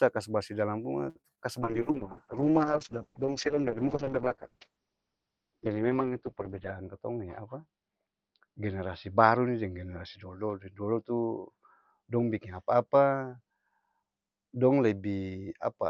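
Just after "kas barsih dalam", from 1.09 to 1.32 s, a short stall from a late packet holds the sound for about 62 ms while the receiver waits, then resumes with nothing lost. On a spectrogram the harmonics run flat and frozen across that gap. The waveform shows a repeated, slightly decaying cycle.

Inside and just after that stretch come two short concealed packet losses, at 1.22 to 1.26 s and 1.35 to 1.39 s. Each is roughly 20 ms of missing audio filled by extrapolation. They sound like brief smears or wobbles and appear as blurred, smoothed patches in the spectrogram.

At 1.62 s a call bitrate drop takes the encoder from 40 to 7 kbps and holds it at the lowest rate for about 5.1 s. The sound turns muffled and watery through to the end. On a spectrogram the energy above 6 kHz disappears, where it previously reached 20 kHz.

From 6.48 to 7.25 s a jitter buffer speed-up plays the audio about 9% fast by cutting out roughly 70 ms of pitch periods. 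The pitch stays the same while the delivery sounds hurried. Syllables appear compressed in time on the waveform, with small splice points between cycles.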